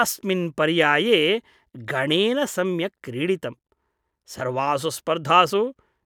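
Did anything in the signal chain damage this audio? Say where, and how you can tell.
No, nothing in the signal chain has damaged this speech recording. At no point in the clip does any stage leave an audible mark on the sound.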